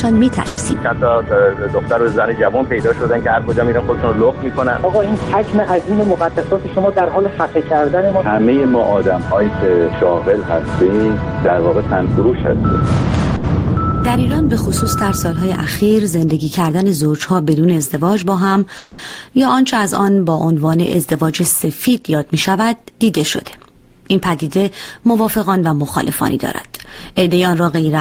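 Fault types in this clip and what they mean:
call audio freeze: The sound holds on as a fading buzz or hiss from 0.47 to 0.59 s and 18.78 to 19.01 s, likely packets held up. Nothing is lost; gaps of 100 and 210 ms are added.
jitter buffer speed-up: Four stretches run fast at unchanged pitch, from 4 to 10 percent quicker. Short pitch-period pieces are cut to shrink an overfull buffer.
short stall from a late packet: At 13.36 s one sound is held about 80 ms too long while a late packet is awaited. Playback then resumes where it stopped.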